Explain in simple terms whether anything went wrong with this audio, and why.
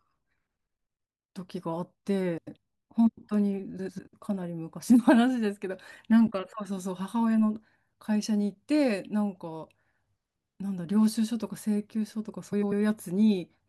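Frames out of order at 2.37–2.57, 3.79–3.99 and 12.52–12.73 s: two short chunks of this speech swapped places, causing a brief garbled flutter.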